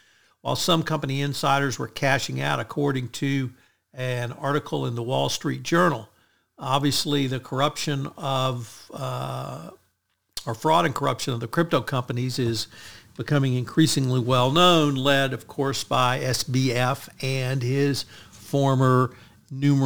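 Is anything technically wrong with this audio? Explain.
Yes. Throughout the speech a gritty, inharmonic fizz rides on louder and brighter sounds, sitting about 25 dB below the speech. This is crude rate conversion from 48 kHz to 44.1 kHz by picking the nearest sample without filtering, creating unrelated tones.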